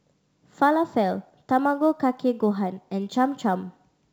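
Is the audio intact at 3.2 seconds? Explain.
No. Sample clock jitter runs through the whole clip, including 3.2 s: the converter's clock wobbles by a few microseconds, so each sample is taken slightly off time. On fast-changing parts of the speech this adds a grainy hiss about 35 dB below the signal.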